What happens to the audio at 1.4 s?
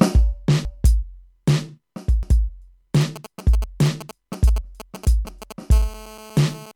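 At 1.4 s the music plays through cleanly, with no dropout, click, distortion or other fault at that moment.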